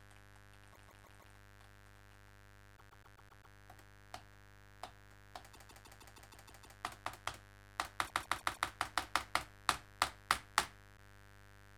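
Right from the start there's mains buzz under the sound, a raspy 50 Hz hum with harmonics climbing well up the spectrum, sitting roughly 20 dB below the signal. Sharp switching spikes got into the chain twice every mains cycle, probably via a dimmer, rectifier or poor shielding.

Then come repeated frames: at 0.72 s a 0.16 s chunk replays four extra times, at 2.76 s a 0.13 s chunk six times, at 5.53 s a 0.16 s chunk eight times, at 8.06 s four times, and at 10.96 s once. Blocks of compressed frames were sent more than once, so you hear stuttering loops, and the clip runs about 3.4 s longer.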